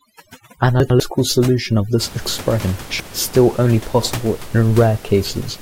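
From 0.0 to 2.0 s, overdone noise removal switches off frequency bands that sit near the noise estimate. That leaves twinkling specks in the pauses. Codec artefacts would smear the sound continuously, not only where it is quiet.

Chunks out of order follow at 0.8 to 1.0 s, where one 100 ms chunk plays a chunk late, and at 2.6 to 3.0 s, where it plays three chunks late, just before "is still only possible". Unlike a dropout, no sound goes missing; it jumps in jumbled order, with three hard joins.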